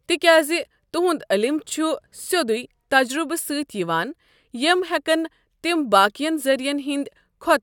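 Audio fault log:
No audible faults anywhere in this speech recording.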